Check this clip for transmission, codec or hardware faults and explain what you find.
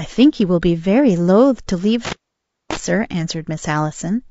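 Two faults are present: codec damage running through the whole speech clip, and a dropout from a bad connection in the middle.

Low-delay AAC compression affects the entire clip. The voice sounds rough and grainy, with a synthetic, smeared top band. This is likely AAC-ELD, the low-delay codec used for calls, at a low rate that fits about 32 kbps. Its short frames cannot separate the pitch harmonics cleanly, so the encoder fills the gaps with noise. On a spectrogram, the harmonic stripes look blurred, with noise filling the space between them and patchy, banded energy at high frequencies.

An intermittent contact cuts the sound between 2.05 and 2.77 s. A loose plug or cable briefly loses connection, and the line stays open for roughly 0.58 s. You hear crackles at the break and at the reconnection, with only faint hiss in between. On the waveform, the signal collapses to near-silence between sharp spikes at each edge. 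On the spectrogram, a blank vertical band appears, bordered by broadband clicks.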